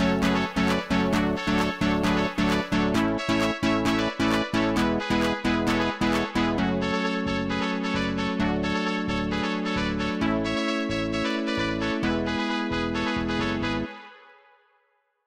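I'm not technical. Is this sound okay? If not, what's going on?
No. Clock slip clicks run from 0.12 to 15.25 s as a fast, regular ticking, roughly fifty per second and several hundred in all. The likely cause is two devices running on unmatched clocks about a tenth of a percent apart, so a single sample keeps getting dropped or repeated.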